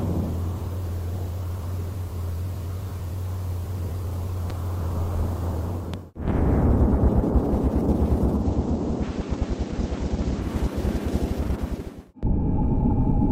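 At 4.50 to 4.53 s and again at 5.94 to 5.96 s, a loud pop sits on top of the sound, which carries on underneath. The first peaks about 5 dB above the programme and the second about 10 dB. Each is likely a brief voltage step or pulse, such as a switch or static discharge, entering the chain. On a waveform each appears as a single tall spike standing clear of the surrounding envelope. A spectrogram shows a thin vertical stripe across the full frequency range.

From 8.31 to 10.53 s the audio drops into a digital radio blending to analogue episode. The receiver loses the digital stream and cross-fades over 157 ms to the FM broadcast, then fades back. Broadband hiss rises to around 30 dB below the programme, and the level falls by about 2 dB. A spectrogram shows a raised grey noise floor across that span.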